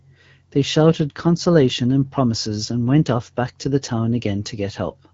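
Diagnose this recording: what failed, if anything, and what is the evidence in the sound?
Nothing in the speech points to a failure at any stage. What can be heard is the band-limited character of the AMR wideband (HD Voice) codec, which fits a rate of about 12.65 kbit/s, with only light coding damage and the speech staying clear.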